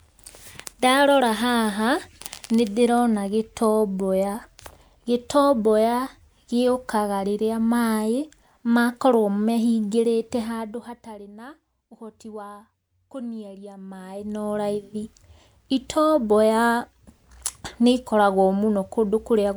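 No technical faults can be heard anywhere in the recording.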